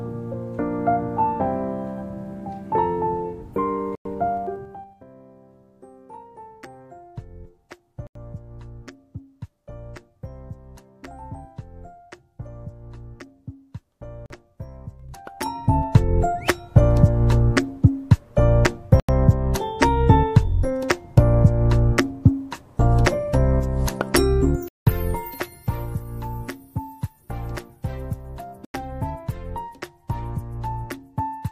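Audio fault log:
3.95 to 4.05 s, 8.07 to 8.16 s, 14.26 to 14.30 s, 19.00 to 19.09 s, 24.68 to 24.87 s and 28.65 to 28.74 s, Bluetooth stall: the sound drops to silence for between 40 and 180 ms, longest at 24.68 s, then resumes. This is likely a wireless link starving the headphone buffer while packets are resent. Unlike a codec dropout or click, there is a true gap with no smear or burst.
4.37 to 5.02 s, 14.90 to 15.92 s and 24.37 to 26.04 s, zipper noise: the level falls about 20 dB, rises about 20 dB, then falls about 15 dB in audible steps of 3, 2 and 1 dB, roughly ten per second. Each jump puts a small click in the waveform, so a ticking rides on the sound while the level moves.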